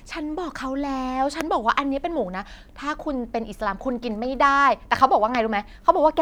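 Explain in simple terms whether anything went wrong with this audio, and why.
Yes, something went wrong. There are two loud pops, from 1.41 to 1.43 s and from 5.35 to 5.37 s. Each is a single sharp click, much louder than the speech, which carries on underneath. They likely come from a sudden electrical jolt, such as a plug or switch.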